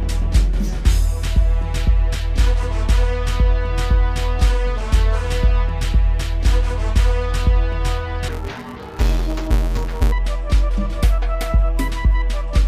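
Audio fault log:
8.28 to 10.13 s: interleaved audio read as planar. Sound turns dull and robotic, buzzing at 172 Hz, which fits short 256-sample blocks split into halves.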